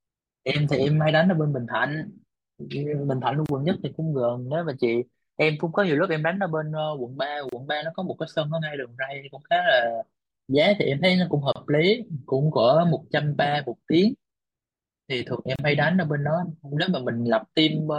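A speech recording with a gap at a join of encoded pieces, recurring every 4 s at 3.46, 7.49, 11.52 and 15.56 s. Each gap lasts about 32 ms with smeared edges, left by separately encoded segments joined without trimming encoder delay and final-frame padding.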